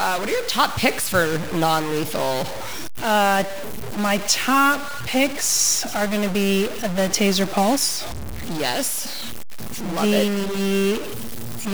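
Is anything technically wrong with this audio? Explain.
Yes. Throughout the speech there is a harsh, buzzy distortion, and the pauses fill with noise instead of going quiet. This points to a stuck bit, likely one data line held fixed. About half the samples jump by a step near -25 dBFS.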